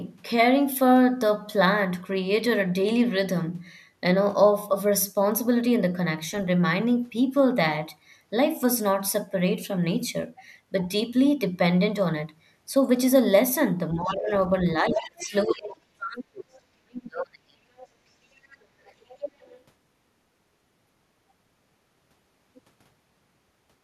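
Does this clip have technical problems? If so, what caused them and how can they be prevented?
Yes. Speech suppressed in double talk occurs at 13.95–14.31 s, 14.79–16.56 s and 16.82–17.7 s, with dips ranging from about 15 dB to nearly 40 dB. The likely cause is an echo canceller that turned the talker down while the far end was also speaking. Unlike a network dropout, these gaps follow the overlapping talk rather than landing at random. A canceller with better double-talk detection prevents it.

The other side's voice leaks through at 14.08–14.15 s, 14.94–15.36 s, 17.77–17.87 s, 18.36–18.65 s and 18.85–19.56 s. It is faint in most spots, but at 14.94 s it comes close to the talker's level. This is likely loudspeaker sound the canceller failed to remove. Unlike a delayed repeat of the talker's own voice, it is a second, different voice. A headset prevents it.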